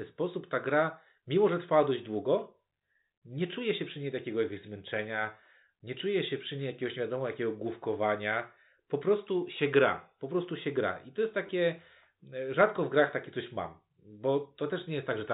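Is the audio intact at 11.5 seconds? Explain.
No. From 11.47 to 11.49 s, just after "gra I to jest", there is a brief robotic stutter. This is packet loss with the last packet repeated. About 20 ms of audio went missing, and the receiver filled the gap by replaying the last packet it had. Those copies repeat at the packet rate, so the short run buzzes. The length suggests two 10 ms packets were lost. The G.711 telephone band can be heard around it.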